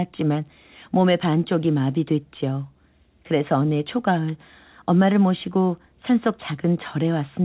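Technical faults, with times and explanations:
No technical faults can be heard in this speech clip. It carries the sound of a working call path, with nothing above 4 kHz and the narrowband character that fits a 64 kbps G.711 mu-law link.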